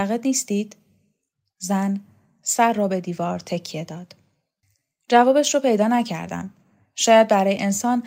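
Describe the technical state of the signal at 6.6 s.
At 6.6 s the speech signal is intact, with no audible dropout, clipping, distortion or other fault.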